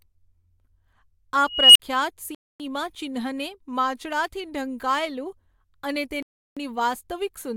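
At 1.46 s an unstable filter makes a squeal around 3 kHz. It swells over 0.29 s, clips, then drops to 43 ms of silence. The sound then cuts out at 2.35 s for 0.25 s and at 6.23 s for 0.34 s, then resumes. These gaps are likely Bluetooth stalls, where the headphones' buffer ran dry.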